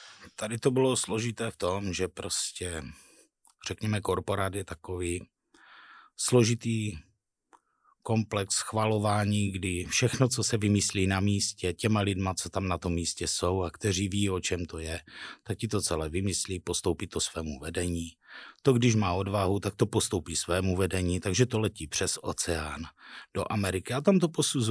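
There are no technical faults to describe anywhere in the recording.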